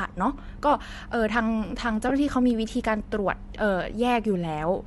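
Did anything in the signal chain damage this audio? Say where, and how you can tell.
Yes. At the codec stage, the speech has a breathy, grainy edge throughout, where the upper band has been thinned and replaced with noise. This is likely Bluetooth LC3 compression at roughly 48 kbps. The grain is tied to the spectrum, unlike the steady hiss of analogue noise, and the highs are not simply cut as a low-pass filter would cut them.

At the network stage, lost LE Audio frames leave a 20 ms noisy smear from 2.09 to 2.11 s, which fits two dropped 10 ms frames. The decoder concealed the gap by reusing the last spectrum with scrambled phase, so the sound blurs rather than clicking or cutting to silence as a buffer dropout would.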